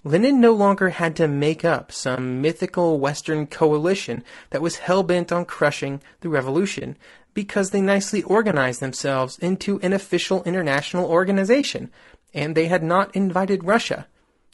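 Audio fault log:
throughout: low-delay AAC compression, likely AAC-ELD near 32 kbps; short frames blur pitch harmonics, leaving the speech rough and grainy with noise between harmonics.
2.15, 4.15, 6.79, 8.51, 11.61 s: AAC frame loss with muting; one frame of about 20 ms was zeroed each time, overlapping windows fading the speech out and back in as a brief dip.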